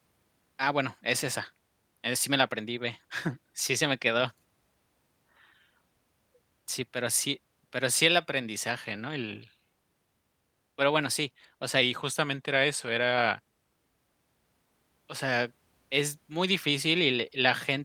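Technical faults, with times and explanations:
11.81–13.75 s, drift correction step: after "bueno sí o sea", speech runs 5.8% slow and a semitone flat, then snaps back. It is one steady step, not a wobble like wow, and likely comes from a clock-matching rate jump.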